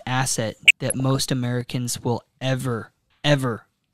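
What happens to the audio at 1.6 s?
One channel drops out at 1.61–1.67 s, before "will ever": speech falls abruptly about 6 dB, likely one stereo side lost before mono summing.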